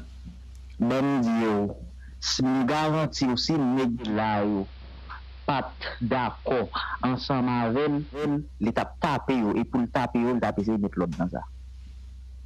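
At 3.97 s a hybrid radio lost its digital signal and made a digital radio blend to analogue, cross-fading over about 185 ms to the AM broadcast until 8.30 s. The audio dulls, drops about 1 dB, and gains hiss roughly 30 dB down.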